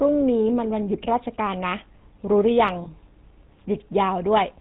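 From start to finish the speech carries the GSM full-rate codec, and the damage is easy to hear. This early mobile codec models the vocal tract and drives it with a sparse train of regular pulses, so the voice picks up that buzzy, gravelly roughness, and everything above 4 kHz is gone, which makes it sound boxed-in and dull. The coarseness fits the old 13 kbps full-rate coding.

Around 2.84 to 2.88 s there's a brief lost GSM frames glitch, short enough that it points to a single dropped frame. When a frame arrives bad, the decoder reuses the parameters from the last good one instead of decoding fresh sound. So for that instant the speech smears into a rough, metallic ring rather than moving on naturally. It's too short to fade toward silence, so it comes across as a quick tinny blip before normal decoding picks up again.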